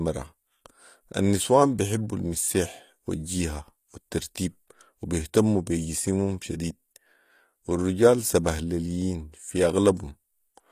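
Speech with plainly audible HE-AAC compression throughout, likely from a bitrate around 24 kbps: the treble up to 15 kHz is bright but rebuilt, so sibilants sound gritty and metallic rather than simply dull or band-limited.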